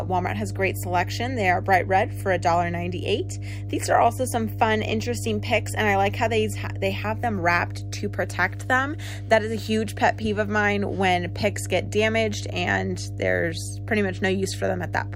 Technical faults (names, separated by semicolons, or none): mains hum